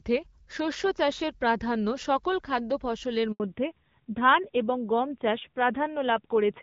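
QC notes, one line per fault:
3.32 to 3.40 s, handover gap: right after "সকল খাদ্য ফসলের" the speech cuts out for about 80 ms, decaying within a few tens of milliseconds into dead silence rather than trailing off naturally. The call was being passed from one network to another, and no speech frames came through while the link switched, so the decoder had nothing to play and whatever was said in that instant is simply gone.
3.40 s to end, fallback to narrowband: from the moment speech resumes after "সকল খাদ্য ফসলের", everything above 4 kHz is absent, so sibilants lose their edge and the speech turns duller, boxier and rougher. The earlier portion carries the fuller, clear band of HD Voice with light coding texture. The change points to the call dropping from AMR-WB to narrowband AMR at a low rate, which fits 7.4 kbit/s.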